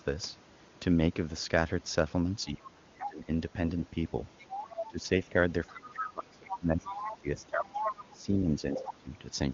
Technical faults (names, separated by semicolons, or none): speech suppressed in double talk; other side's voice leaking through